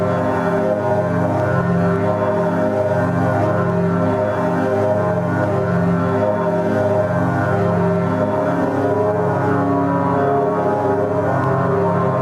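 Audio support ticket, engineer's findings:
Gain pumping throughout. Gain swings around 5 dB under each loud sound; dynamics squashed. Likely input gain set far too high, fast limiter clamping every peak.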